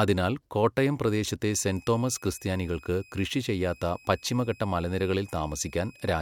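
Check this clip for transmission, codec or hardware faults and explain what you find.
There's one hardware fault here, a switching supply whistle. It comes in at 1.50 s, right after "അതിനാൽ കോട്ടയം പ്രദേശത്തെ", and runs to the end of the clip. It's a thin, high tone wandering between 2.51 and 2.54 kHz, sitting roughly 30 dB under the speech. A switch-mode power supply near the recording chain is dropping into an audible burst mode, or two supplies are beating. That pulsing gets into the audio, and the small pitch drift follows the changing load.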